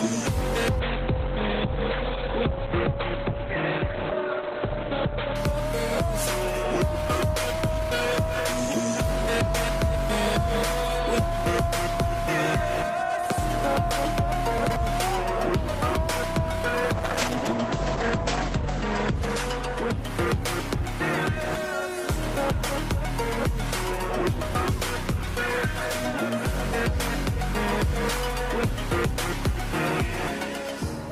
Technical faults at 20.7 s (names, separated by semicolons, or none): call bitrate drop